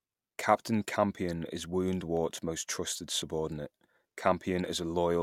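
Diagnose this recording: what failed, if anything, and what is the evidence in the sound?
A block of digital silence at 2.17 s, just before "most trusted subordinate", is heard as a single sharp tick in the speech. At the driver or buffer stage, samples weren't delivered in time, so 0.73 ms dropped straight to zero. That fits a 32-sample block, and its unfaded edges produce the click.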